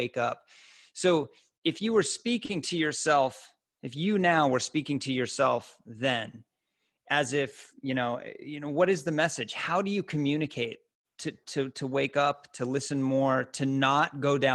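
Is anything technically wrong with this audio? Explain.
Yes. Two faults occur in this speech clip.

At about 2.45 to 2.51 s, after "so if you were", there is a short stall from a late packet. The jitter buffer ran empty, so the last sound was stretched by 40 ms. It sounds held, with a slight buzz.

From 7.89 to 8.49 s, after "as if" and before "know what is the", there is a jitter buffer speed-up. About 40 ms of pitch periods were trimmed. Speech runs at 105% speed, at unchanged pitch, and sounds hurried.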